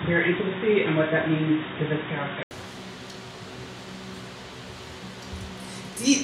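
For the first 2.51 s the sound is dull and boxy, with nothing above about 3.8 kHz, background noise sitting roughly 30 dB under the signal, and a level some 5 dB different from what follows. At 2.51 s a brief gap of about 80 ms gives way to fuller, clearer sound. The likely cause is an input switched to a poorer device, such as a headset's call profile, before the system moved back to a wider-band microphone.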